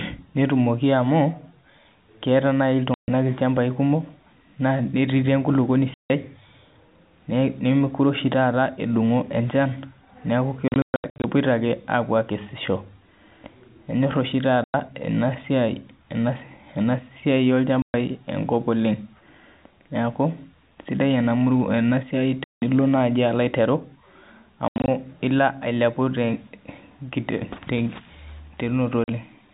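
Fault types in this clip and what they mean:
Packet loss filled with silence: pieces of the speech stream never arrived, and the receiver played dead silence in their place. The speech cuts out abruptly at hard edges. The holes run from 40 ms to 180 ms, with a scattered cluster between 10.68 and 11.24 s. All of them come in steps that fit 20 ms packets. That sets them apart from concealment, which would smear or repeat sound rather than go completely silent.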